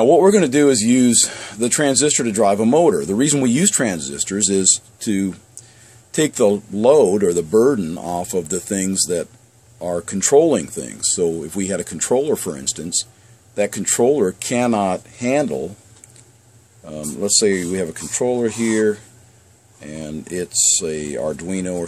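No technical faults can be heard anywhere in this recording.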